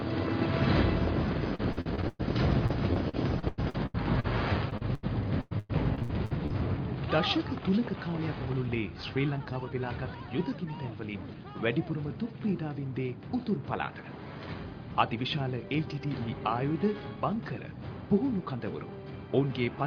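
From 1.55 to 5.05 s, then again from 5.41 to 6.52 s, there's repeated packet loss with that robotic sound. Gaps up to about 0.1 s get patched by stretching the last bit of audio, covering about a fifth then about a third of each stretch, so it turns choppy.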